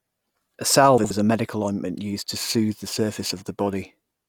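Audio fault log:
0.98–1.11 s, frames out of order: a brief garbled flutter just before "a medical ointment used", from two neighbouring 64 ms blocks played swapped.
2.36–4.29 s, periodic clock jitter: after "medical ointment used to", the speech takes a rough, metallic edge that drops out in pauses, as the converter clock wobbles around 2 kHz.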